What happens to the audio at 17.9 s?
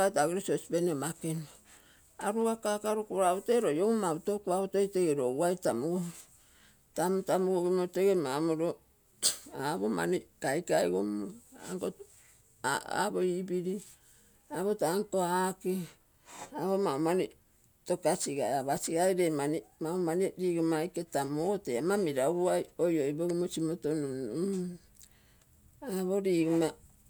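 At 17.9 s the speech carries on intact, with no dropout, click, distortion or other fault at that moment.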